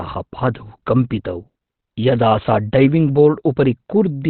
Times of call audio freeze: none

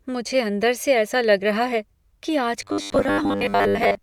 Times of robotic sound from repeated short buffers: 2.62-4.02

